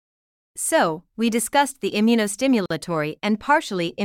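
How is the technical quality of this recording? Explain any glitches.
The recording has one glitch, a gap at a join of encoded pieces, from 2.66 to 2.70 s. Separately encoded pieces, apparently about 4 s long, were joined untrimmed, leaving encoder delay and end padding in place. The speech drops into a 46 ms hole with smeared edges, then resumes exactly where it stopped.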